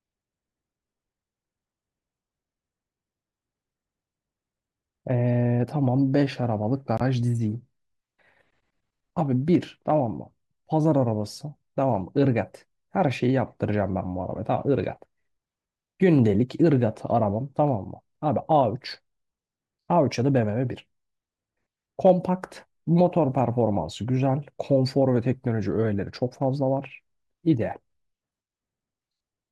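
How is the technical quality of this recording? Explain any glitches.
One glitch stands out in the speech. From 6.98 to 7.01 s the sound cuts to abrupt silence for about 34 ms, which fits two frames being lost. This is a corrupt frame muted fault: damaged compressed frames were rejected by the decoder and replaced with silence, so timing stays intact.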